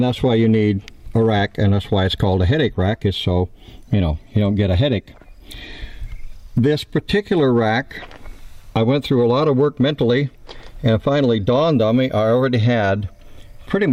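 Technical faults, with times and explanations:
No technical faults are audible.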